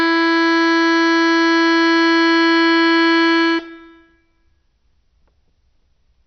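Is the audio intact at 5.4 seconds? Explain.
No. At 5.4 seconds, as throughout the music, the sound is dull and muffled, with nothing above about 6.2 kHz, and a gurgling, granular roughness. This is likely heavy MP2 compression, at a rate that points to around 48 kbps. The MPEG Layer II coder splits the audio into 32 sub-bands and shares out too few bits, so the upper bands are switched off and the remaining ones are coarsely quantised, flickering as they come and go.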